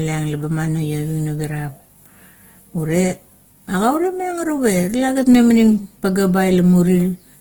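Throughout the clip, a low-bitrate encoder, likely Opus compression in its music-oriented CELT mode, appears to be starving the speech of bits, which fits a rate near 16 kbps. The coder still keeps energy in every band across the full range, up to about 20.2 kHz, but fills the bands it cannot afford with folded or noise-like content. The damage is plainly audible: the voiced sounds come out grainy, rough and hissy instead of clean.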